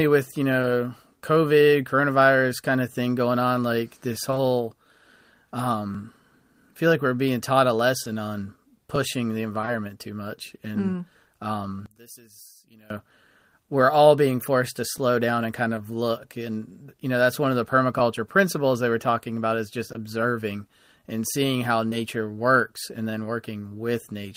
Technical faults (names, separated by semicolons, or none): short concealed packet loss; overlapping chunks; scattered short gaps; one channel inverted